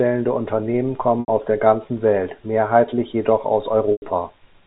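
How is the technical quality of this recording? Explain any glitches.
Two brief glitches, both packet loss with pitch repetition. At 1.2 s, 80 ms of audio is lost, and at 3.92 s, 100 ms is lost, which fits runs of 20 ms packets. The receiver loops the last pitch period across each gap and fades it out, so you hear a short, buzzy, held sound that dips toward quiet. The speech then cross-fades back in. The whole thing is carried over G.711 telephone coding, so nothing above 4 kHz comes through.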